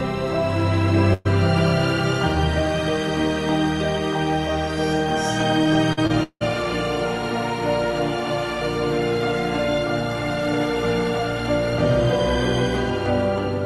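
A burst of packet loss at 1.13 to 1.27 s drops about 120 ms of audio. The receiver stretches the last sound into a fading buzz or hiss, then resumes past the gap. Short concealed packet loss at 5.93 to 5.99 s and 6.07 to 6.11 s loses about 40 ms and 20 ms. Each hole is patched by extending the preceding sound, heard as a brief smear or wobble. From 6.23 to 6.43 s, likely a long network dropout, about 180 ms never arrives. The filler fades out and leaves roughly 70 ms of silence before the audio returns further on. Throughout, the top end stops near 12 kHz, consistent with the call codec's bandwidth limit.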